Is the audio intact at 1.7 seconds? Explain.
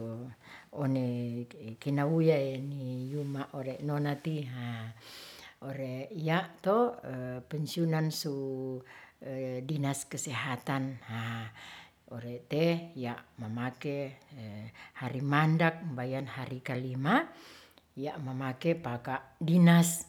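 Yes, the speech at 1.7 seconds plays through intact, with no dropout, click, distortion or other fault at that moment.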